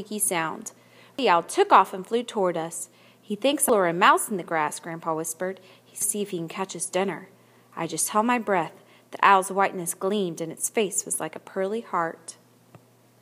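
Damaged data in a compressed stream shows up at 1.19, 3.69 and 6.02 s. At each point the decoder meets corrupted bytes, misreads or discards the affected frames and resynchronises on the next valid frame header, briefly breaking the audio.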